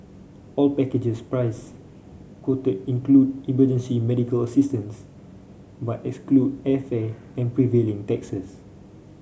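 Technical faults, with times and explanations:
No technical faults are audible in this speech recording; the signal stays steady and intact throughout.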